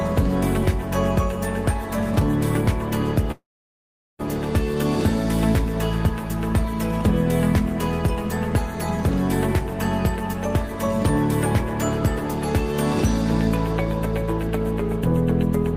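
A call audio freeze runs from 3.31 s to 4.21 s. The sound stops moving forward and the last moment trails off as a brief fading buzz, then sits silent for about 0.77 s of the 0.88 s stall. Packets were likely held up in transit until the jitter buffer emptied, leaving the receiver to stretch and then mute its output. When delivery resumes, the audio picks up exactly where it halted, so nothing is lost, but everything afterwards arrives 0.88 s later.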